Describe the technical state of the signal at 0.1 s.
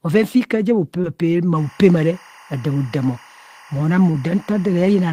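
At 0.1 s the signal is intact, with no dropout, distortion or other fault to be heard.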